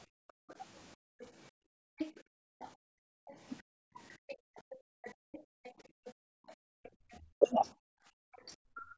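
From 0.06 to 4.56 s, the background is gated by the echo canceller. The room sound drops by about 40 dB in patches totalling roughly two seconds. The canceller clamps the microphone while the loudspeaker plays, then releases it.

From 0.28 to 3.35 s, the other side's voice leaks through. It sits about 15 dB below the talker. This is likely echo the canceller failed to remove from the microphone.

From 3.22 to 5.34 s, speech is suppressed in double talk. The talker's voice dips by roughly 40 dB. With both sides talking, the canceller likely turns everything down.

From 4.28 to 8.54 s, the far voice leaks again, about 20 dB down. It is likely residual loudspeaker echo.

Gating returns at 5.62 to 6.84 s and 7.86 to 8.43 s, again dropping about 40 dB.

Double-talk suppression hits at 7.17 to 7.58 s, about 30 dB deep, and from 8.71 s to the end, about 35 dB. Each time, the talker's voice likely loses out to the overlapping far side.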